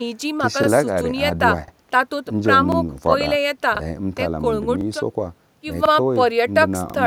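Overlapping chunks occur at 0.64–0.68, 1.68–1.72, 2.72–2.77, 3.77–3.81, 4.81–4.86, 5.86–5.90 and 6.90–6.94 s. The speech was handled in 1.0 s blocks, and each new block begins 44 ms before the previous one finished, so that 44 ms slice plays twice at every join. Because of the repeat, the joins fall about every 1.04 s. Each join is heard as a brief click or stutter, a small doubled fragment breaking the flow at a steady rhythm.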